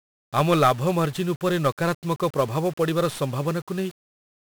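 Throughout this speech clip the sound is fuzzy and crackly, with a dense layer of hiss swamping the upper frequencies. These are the marks of 1-bit DFPWM compression, and heavy ones. Each sample is reduced to a single up-or-down step that nudges an adaptive level. The result is strong broadband quantisation noise, and the detail fits a rate of roughly 48 kbps. On a spectrogram a grey noise floor covers the whole band and hides the treble. The waveform looks rough and jagged rather than smooth.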